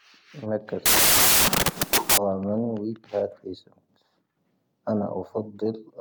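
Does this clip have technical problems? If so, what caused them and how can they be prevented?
Yes. From 0.86 to 2.18 s there is a wrong sample width fault: the data, which fits 16-bit samples, was read as packed 24-bit, so each value mixes bytes from neighbouring samples. The speech surfaces faintly beneath loud noise, running 1.5 times fast and raised in pitch. Prevent it by carrying the sample format in the file header or stream metadata and verifying it before decoding.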